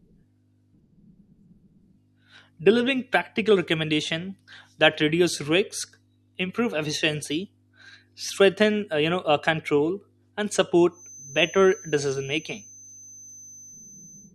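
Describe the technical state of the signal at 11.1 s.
At 11.1 s a thin, slightly wavering 6.1 kHz feedback whistle sits well below the speech, running from 10.88 s to the end, likely from a loudspeaker-microphone loop held just short of runaway.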